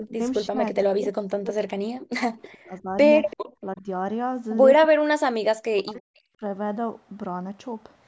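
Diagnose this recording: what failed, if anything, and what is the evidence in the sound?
The call's echo canceller likely misread double talk as echo and suppressed the speech. The speech is cut at 0.0–0.21, 0.5–2.96, 3.61–3.87, 4.86–5.14, 5.58–6.18 and 6.37–6.43 s, sometimes by about 40 dB.

In the call processing, the echo canceller likely failed to remove all of the loudspeaker pickup. The result is an echo leak at 3.3–3.37 s: a faint copy, about 25 dB down, arriving 335 ms late.

The echo canceller then clamped the microphone, causing background gated by the echo canceller. The room sound falls about 40 dB from 3.37 to 3.46 s, then returns.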